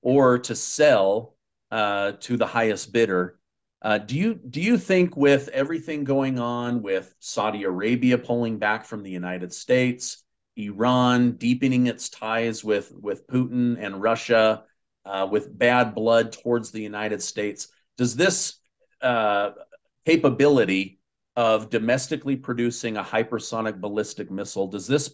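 No technical fault can be heard anywhere in this clip. Nothing in the sound points to a problem in how it was captured, processed or passed along.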